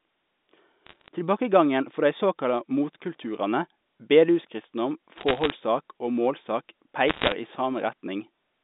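Bit errors on a digital phone line crackle over the speech at 0.86–1.08 s, 5.16–5.5 s just after "dei såkalla motkulturane bedehuskristendom", and 7.08–7.32 s. Each flipped bit corrupts one telephone-coded sample, and a hit on a high bit makes a sharp tick. The last burst, near 1.5 percent errors, is densest.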